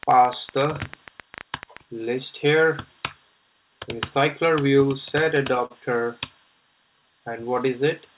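From 0.03 s to 1.78 s a rapid ticking rides over the sound, roughly twenty sharp clicks at an uneven pace averaging about 10 per second, the loudest peaking around 10 dB above the program. They keep much the same shape and carry on through quiet moments, marking this as a train of clicks. The likely cause is electrical interference from nearby equipment or a faulty connection or power supply injecting short pulses into the signal.

Between 5.24 s and 5.72 s the audio catches and hitches four times in quick succession, each brief hold stretching what was just heard before playback resumes. These repeated stalls (stutter) come from packets arriving late, so the jitter buffer ran dry over and over. The receiver filled 74 ms in total by extending the last sound, with the longest wait 40 ms, and nothing was actually lost. The passage simply drags.

From 6.89 s to 7.42 s the sound slows to about 91% of its normal pace while the pitch stays where it was, so sounds feel drawn out. 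This is a jitter buffer slow-down. To rebuild its reserve, the receiver repeated single pitch periods and small stretches of pause many times over, adding about 53 ms across that half second. Throughout, the call path leaves nothing above 4 kHz, which fits G.711 A-law at 64 kbps.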